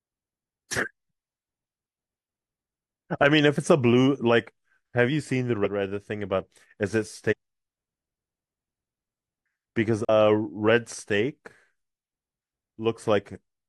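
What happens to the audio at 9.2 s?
Nothing goes wrong at 9.2 s; the speech there plays through cleanly, with no dropout, click or distortion.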